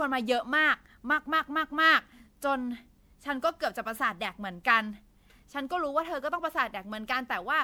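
Throughout, the speech sounds swirly, hollow and smeared, with blurred consonant attacks, likely generation loss from repeated MP3-style re-encoding, around seven passes at roughly 128 kbit/s.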